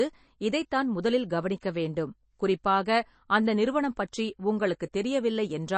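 From start to finish the speech carries plainly audible MP3 compression damage, likely from a low bitrate around 32 kbps. The encoder drops the treble entirely above 8.3 kHz and zeroes weak spectral lines frame by frame, giving a watery, swirly texture and smeared consonant attacks. A spectrogram shows a hard ceiling at 8.3 kHz with patchy, flickering holes below it.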